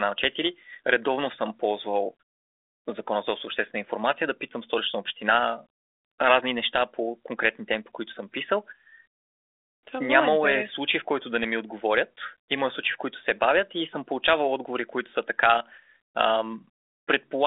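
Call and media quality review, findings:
No faults found: the speech arrives over a G.726 ADPCM path at 32 kbit/s, with a 300 Hz to 3.6 kHz telephone band, nothing above 3.8 kHz, and only the light coding texture expected of a working link at that rate.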